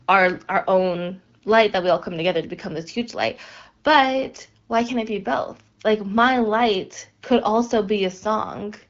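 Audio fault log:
Nothing to log here: the speech comes through the AMR wideband (HD Voice) codec at 12.65 kbit/s, and no faults turn up anywhere in it.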